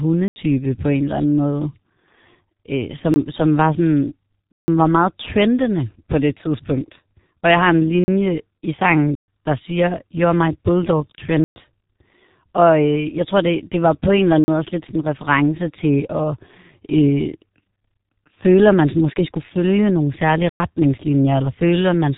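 G.723.1 codec damage runs through the whole speech clip and is heavy. Nothing survives above 3.8 kHz, and the bitrate, about 6.3 kbit/s, fits this early internet-telephony codec. It codes the voice in 30 ms frames with a coarse speech model that adapts slowly, so the result sounds muffled and hoarse. Consonants lose their edges and smear together because the model cannot follow fast changes in the signal.

A block of digital silence cuts in at eight points: 0.28 to 0.36 s (80 ms), 3.14 s (about 19 ms), 4.52 to 4.68 s (160 ms), 8.04 to 8.08 s (40 ms), 9.15 to 9.28 s (128 ms), 11.44 to 11.56 s (120 ms), 14.44 to 14.48 s (40 ms), and 20.49 to 20.6 s (106 ms). Each time the audio is replaced by zeros and drops out and returns with no fade. The cause is either output buffers not being filled in time or a calculation yielding invalid values. The longer blocks leave audible holes, and the briefest is a quick dropout.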